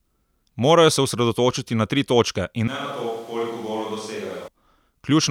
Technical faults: switch to a distant microphone

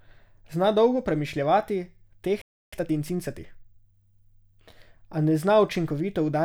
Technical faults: playback stall; time-compressed catch-up

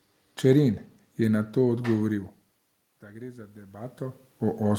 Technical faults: automatic gain rising

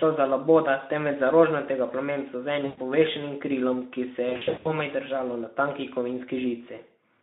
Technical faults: VoIP packet loss concealed by the speech codec

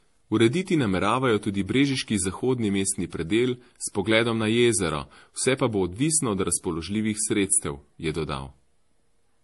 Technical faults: transcoding between lossy codecs

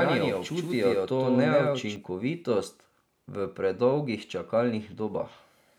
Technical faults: doubled audio track

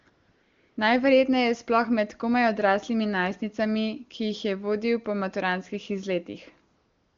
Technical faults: AMR comfort noise

